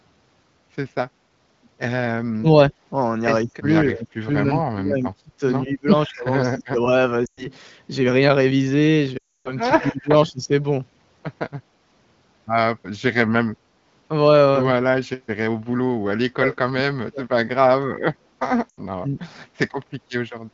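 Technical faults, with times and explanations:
2.38–2.47 s, 3.45–6.86 s, 9.79–10.51 s, 16.01–17.39 s, 18.98–19.19 s: speech suppressed in double talk. The speech dips by as much as about 35 dB, thinning or cutting out in pieces. The likely cause is an echo canceller that heard both sides at once and turned everything down. Unlike frame loss, these are uneven level drops with no drawn-out, smeared sound.
7.25–7.47 s, 9.17–9.54 s, 18.69–18.80 s: lost AMR speech frames. The gaps of 120, 280 and 80 ms drop to near silence within two frames, and the speech returns briefly rough. The wideband decoder is repeating its last pitch and vocal tract shape at falling gain, and the longest gap fits about 14 lost frames.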